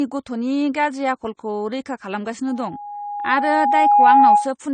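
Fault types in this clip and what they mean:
Transcoding between lossy codecs, throughout: nothing above 9 kHz, with the artefacts of both codecs heard layered together, likely from an MP3 encode re-encoded to low-rate AAC-LC.
Loudspeaker feedback squeal, 2.47 to 4.54 s: an 825 Hz tone swells over about a second and a half to roughly 10 dB above the speech as the loop runs away.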